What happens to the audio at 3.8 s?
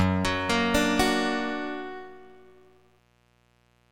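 At 3.8 s you're still hearing the mains buzz that runs under the whole clip. It's a steady, raspy buzz sitting roughly 40 dB below the signal, so it's faint but persistent. It comes from sharp switching spikes, from something like a dimmer, a rectifier or a missing shield, leaking in twice per cycle of 60 Hz mains. Those spikes spray harmonics of 60 Hz up into the kilohertz range, which gives it that gritty edge.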